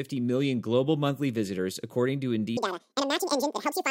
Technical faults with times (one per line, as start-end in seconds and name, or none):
2.57-3.91 audio read two samples at a time (double speed)